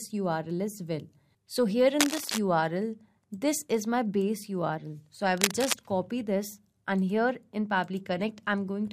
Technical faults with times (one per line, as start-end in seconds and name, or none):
2.00-2.39 cable scratch noise
5.37-5.76 cable scratch noise